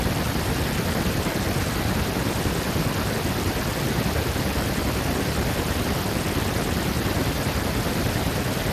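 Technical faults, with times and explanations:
Throughout: Speex codec. The speech has a plainly audible hoarse, grainy texture. That comes from the CELP coder modelling the voice with a limited excitation budget, and the degree of damage fits a middle setting around 22 kbps. At that setting the upper band is rebuilt as shaped noise rather than coded detail. The band stops at 15.3 kHz, with nothing above it.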